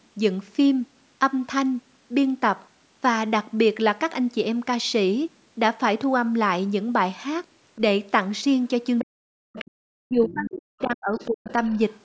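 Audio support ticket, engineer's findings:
Other side's voice leaking through at 8.98–9.05, 9.55–9.71, 10.25–10.59, 11.17–11.30 and 11.46–11.97 s, about 10 to 25 dB under the talker. Likely residual loudspeaker echo the canceller missed. Spectrogram: faint second harmonic stack overlapping the talker's.

Speech suppressed in double talk at 9.04–9.57 and 10.05–11.48 s: talker's level dips sharply, up to around 40 dB, while the far side speaks. Likely echo canceller attenuating the talker along with the loudspeaker echo. Waveform: envelope dips.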